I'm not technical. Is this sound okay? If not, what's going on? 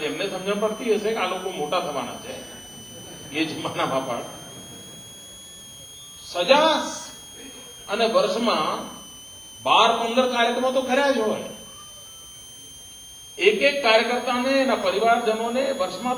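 No. A switching supply whistle runs throughout: a power supply is buzzing audibly, adding a high whine around 3 kHz that wanders up and down.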